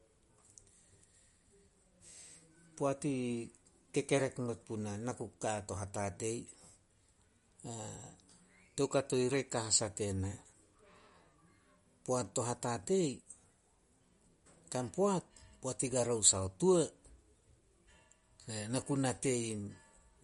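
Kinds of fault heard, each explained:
MP3 compression: The speech stops dead at 11.2 kHz and has a plainly audible watery, smeared texture. Likely MP3 coding starved of bits, fitting about 48 kbps.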